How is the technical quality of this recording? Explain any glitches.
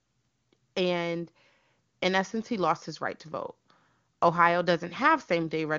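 Nothing here needs explaining: the speech reaches the ear through the AMR wideband (HD Voice) codec at 23.85 kbit/s, the top of its range, where any traces of the coding are faint at most, and there are no glitches to point to.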